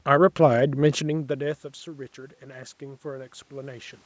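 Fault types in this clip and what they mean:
Automatic gain rising: Around one second in, the talker moved away and the input dropped by about 22 dB. The gain control then raised its gain slowly, by about 8 dB. Voice and room noise swell together from 0.79 to 4.01 s.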